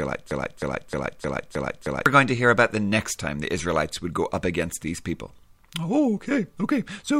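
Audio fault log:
0.00–2.06 s, broken-record loop: The clip opens with the loop already running. A fragment of speech about 310 ms long repeats exactly, back to back, six times. Each pass is identical, so the sound stutters in a rigid rhythm of roughly three repeats per second. The likely cause is a player, encoder or stream that stalled and kept resending the last piece it held. The speech that belonged in those two seconds is lost.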